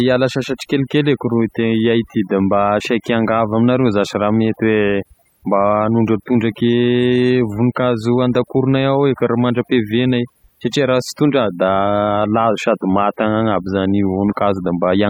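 From start to finish there's overdone noise removal: the denoiser clamps bands near its noise estimate, so the background sparkles with twinkly specks.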